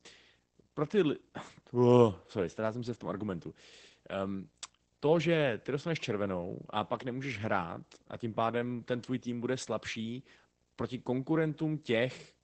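It's a speech clip with two problems running the whole way through. There's video or display buzz, a faint hum at the 59.94 Hz field rate plus a thin 15.7 kHz line-rate whine, from a screen or video cable leaking into the audio. It's also been through Opus voice compression in SILK mode: the voice sounds muffled, hoarse and slightly robotic, and the sound points to roughly 12 kbps at wideband.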